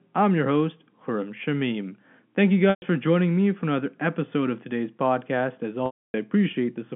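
At 2.70 to 2.82 s, just before "for joining me for", a 120 ms packet loss with pitch repetition fills the gap: the receiver repeats the last pitch period, giving a brief buzzy hold that fades out over about 50 ms before the speech cross-fades back. A longer 280 ms loss at 5.86 to 6.14 s starts with the same buzz, then drops to silence until the speech resumes. Both sit within the 150 Hz to 3.4 kHz telephone band of the G.711 line.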